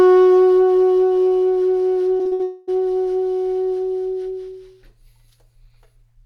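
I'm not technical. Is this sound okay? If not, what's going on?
No, there are two problems close together, both in the music just after 2 seconds.

From 2.17 to 2.41 s you hear repeated packet loss (robotic sound). Four small pieces of the audio went missing on the way, the longest about 60 ms. Each time, the player covered the hole by stretching out the sound it had just played. Over half of this short stretch is that filler, so the music turns choppy.

Right after, from 2.43 to 2.69 s, the music stops moving forward and is replaced by a smeared continuation of the last sound for about a quarter of a second, with no gap of silence. The music then picks up again further along, with that portion gone. This is likely a long network dropout: nothing arrived for that stretch, so the receiver filled it.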